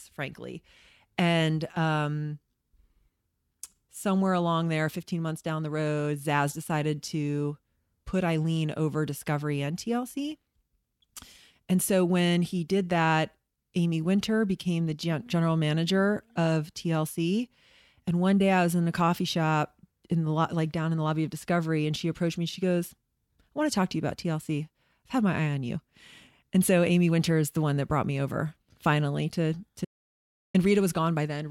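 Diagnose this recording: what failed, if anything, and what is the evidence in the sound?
The speech stops dead just after "me over finally to" at 29.85 s and resumes at 30.54 s, leaving about 0.69 s of silence with no room tone. This audio dropout to silence likely comes from a lost input link at the device or driver stage while zeros kept being written.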